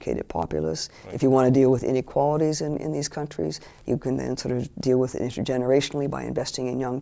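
No dropouts, clicks, distortion or timing breaks are audible at any point in the audio.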